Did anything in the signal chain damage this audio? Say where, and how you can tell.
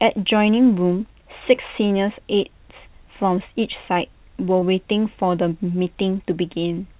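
Yes, at the network stage: short concealed packet loss at 3.94 s and 4.59 s, each gap fitting one lost 20 ms packet. The receiver extended the preceding sound, leaving brief smears in the speech.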